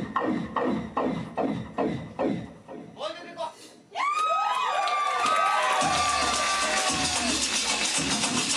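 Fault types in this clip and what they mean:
doubled audio track: from 5.23 s, an equally loud copy trails about one second behind, starting abruptly with no decay, unlike echo; likely a slower second capture.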